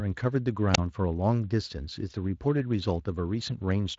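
A wireless microphone squelch dropout occurs at 0.73 to 0.78 s. The FM radio link fades, hiss briefly rises, and the receiver's squelch mutes the output to near silence for 26 ms before the speech returns. The surrounding Speex coding leaves nothing above 7.7 kHz.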